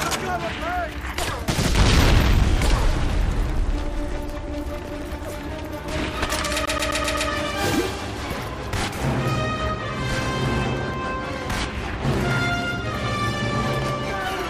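A CD stuck on one turn interrupts the sound from 6.66 to 7.30 s, where the same 128 ms slice of audio plays five times in a row, each repeat separated by a brief mute at the jump. The effect is a fast, perfectly even stutter: a scratch keeps knocking the laser back one track at the same point on each rotation, so playback loops instead of moving forward until it finally breaks free.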